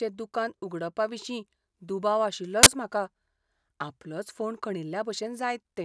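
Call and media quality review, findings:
File tags played as audio, 2.63–2.66 s, just after "दुकान उगडपाविशीं दुबाव": sudden burst of very loud white noise with hard edges, about 30 ms. Probable component: decoder/demuxer reading an embedded cover picture's compressed bytes as samples.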